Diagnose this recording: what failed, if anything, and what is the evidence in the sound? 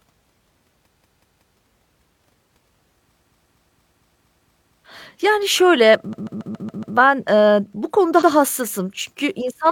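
Repeated frames at the codec or storage stage make the speech stutter, replaying the same short block back to back. At 0.93–1.49 s a 186 ms block plays three extra times; at 3.16–4.79 s a 232 ms block plays seven extra times; at 6.09–6.92 s a 139 ms block plays six extra times; at 8.18–8.27 s a 93 ms block repeats once. Block lengths fit runs of a few compressed frames that were written or sent more than once, adding roughly 3.1 s in total.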